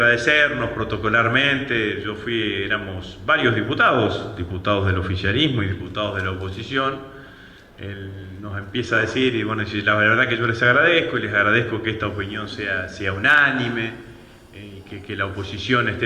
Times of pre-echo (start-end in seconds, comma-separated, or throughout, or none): none